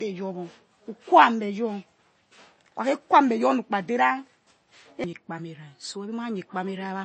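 From start to finish, the speech carries MP3 compression damage, and it is plainly audible. Nothing is left above about 8.3 kHz. The treble stops at a hard ceiling. The likely cause is an encoder starved of bits, which fits a low rate near 32 kbps. To save bits, it drops the top band and discards weak frequency detail. That detail flickers in and out between frames. The result is a watery, swirling texture, with s sounds turned metallic and dull.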